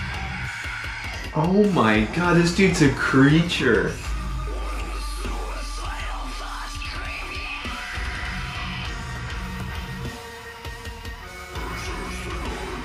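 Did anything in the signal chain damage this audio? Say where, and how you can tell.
Yes. From 9.43 s to 11.83 s a gritty, inharmonic fizz rides on top of the audio, tracking its louder and brighter parts, with error components around 20 dB below the signal. That is crude rate conversion at the sample-format conversion stage. Samples were repeated nearest-neighbour style with no interpolation filter, which fits a 32 kHz to 48 kHz step. The repeat pattern set by that 2:3 ratio produces shifted, inharmonic copies of the content.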